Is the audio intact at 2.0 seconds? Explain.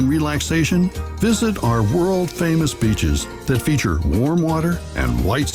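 No. Around 2.0 s the sound has an unsteady, faintly dragging tempo with small hiccups. This is part of the repeated timing corrections that run from 0.58 s to 4.22 s. Across that stretch the receiver keeps inserting short repeated fragments to stay in step, so the passage plays at about 97% speed and grows by roughly a tenth of a second in total. The edits are uneven in spacing but all lengthen the audio.

Behind this is clock drift between sender and receiver, present throughout the clip. The sender's clock runs roughly 2% slower than the receiver's, so the jitter buffer keeps draining. The receiver fills the gaps by repeating small pieces, which causes the slight stutters and the loose, uneven pacing heard at 2.0 s.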